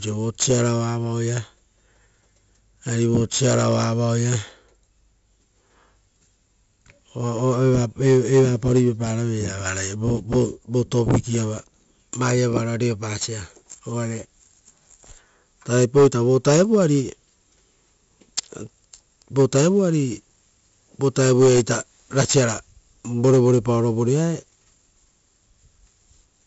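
A speech recording carries 4-bit ADPCM compression from start to finish. Each sample is coded as a small step from a predicted value. The step size adapts as the signal changes. The coding error is broadband noise that tracks the level, so a gritty hiss rides on every loud syllable. Sharp onsets distort where the step cannot grow fast enough. The roughly 64 kbps rate fits a 16 kHz sample rate, which dulls the top.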